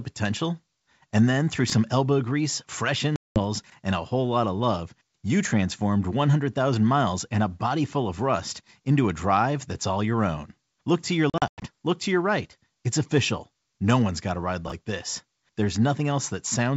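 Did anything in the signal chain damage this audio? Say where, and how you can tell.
Yes. Three brief garbled moments at 1.68–1.72 s (after "then through"), 3.64–3.72 s and 14.68–14.72 s (after "one's got a ride") are chunks out of order in the buffer stage. Each 20 ms chunk played one chunk late, three chunks late at 3.64 s, leaving hard joins.

Hard-edged silent holes at 3.16–3.43 s, between "elbow grease fresh" and "and a whole lot", and at 11.30–11.67 s are packet loss on an ADPCM call, in the network stage. The first hole is 200 ms, around ten packets. The second is 200 ms scattered over 320 ms, with a longest gap of 100 ms. After each hole the G.722 decoder's predictor and step size no longer match the sender's, so the returning sound distorts briefly.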